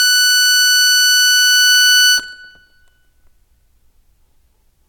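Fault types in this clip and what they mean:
No technical faults can be heard in the music, and the signal stays continuous and stable throughout.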